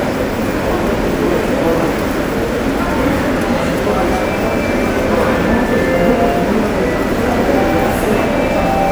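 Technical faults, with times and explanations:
No technical faults can be heard in this audio.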